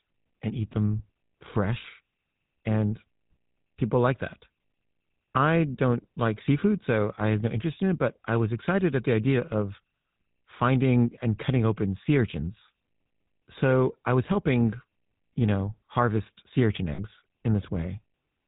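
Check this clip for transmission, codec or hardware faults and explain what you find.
Two faults are present, both from a GSM phone link.

The GSM full-rate codec affects the whole clip. It models the vocal tract and drives it with a sparse pulse train. Nothing above 4 kHz survives. The speech sounds buzzy and gravelly throughout, which fits the 13 kbps full-rate codec.

Lost GSM frames occur at 1.82 to 1.86 s and at 16.94 to 17.00 s, right after "know harvest sea urchin". The decoder repeated the settings of the last good frame. Each gap, 20 ms and then 40 ms, is held as a brief, rough metallic ring.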